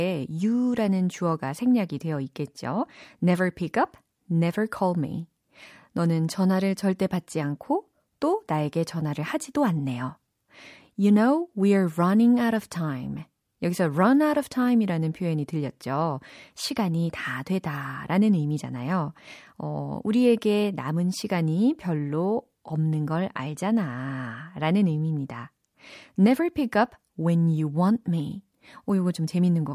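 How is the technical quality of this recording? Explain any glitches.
No technical faults are audible.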